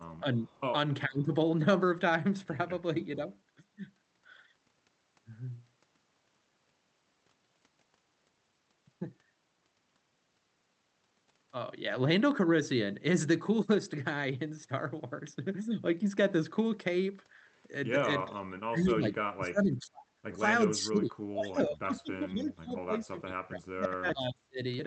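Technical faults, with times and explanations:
0.21 to 0.25, 1.08 to 1.29: speech suppressed in double talk. The voice dips briefly, by about 10 dB and then about 20 dB, most likely because the echo canceller treated overlapping far-end talk as echo and turned the talker down with it. Unlike an echo leak, nothing extra is added; the talker's own level drops.
18.29 to 19.17, 19.34 to 20.04, 20.69 to 24.61: speech suppressed in double talk. The same ducking returns much deeper, about 30 to 35 dB, with stretches turned down over roughly 3 s near the end.
0.47 to 0.60, 22.42 to 22.46: echo leak. A faint copy of the voice trails by 432 ms, about 40 dB and then about 30 dB below the speech, likely from residual loudspeaker pickup getting past the canceller. It is a delayed duplicate rather than a dip in level.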